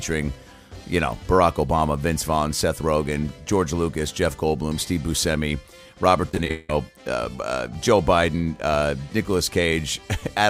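From 6.29 to 6.70 s the audio breaks into repeated packet loss (robotic sound): roughly seven holes in quick succession, the longest about 175 ms, each patched by extending the preceding sound. Unlike a single dropout, the rapid chain of fills gives a choppy texture.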